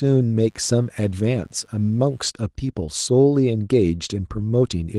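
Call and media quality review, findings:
Steady raspy buzz under the speech, 0.44 to 2.27 s, about 40 dB below the signal. Mains buzz: 50 Hz switching spikes from a dimmer, rectifier or unshielded lead, twice per cycle, harmonics into the kHz range.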